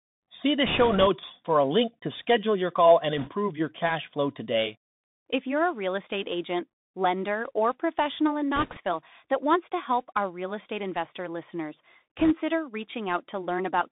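From the start the speech is carried by a Bluetooth CVSD headset codec, confined to roughly 150 Hz to 3.7 kHz. Its one-bit delta coding leaves a granular hiss, scratchy s sounds, and slope overload where loud high content outruns the adapting step size.

Bit errors on a Bluetooth voice link occur at 0.65 to 1.07 s, 3.18 to 3.29 s, 8.56 to 8.80 s and 12.18 to 12.32 s, at an error rate of a few percent. Each flipped bit nudges the waveform only slightly and decays, producing rushing crackle rather than loud clicks.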